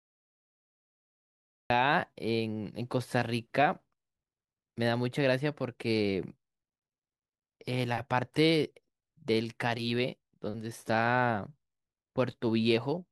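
Speech with a cut-off start. The first 1.70 s is digital silence. The audio then begins mid-sound at 1.70 s, with no natural attack, because recording started late.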